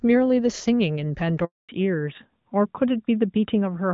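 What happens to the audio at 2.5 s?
At 2.5 s the speech sounds dull, muffled and rough, with nothing above 4 kHz. This is a fallback to narrowband, from 1.69 s to the end: the call drops from AMR wideband (HD Voice) to what sounds like AMR narrowband, which removes the upper band entirely.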